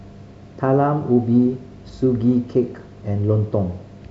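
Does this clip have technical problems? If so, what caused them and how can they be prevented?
No, nothing in this speech recording stood out as a technical problem on listening, so there is nothing here that needs preventing.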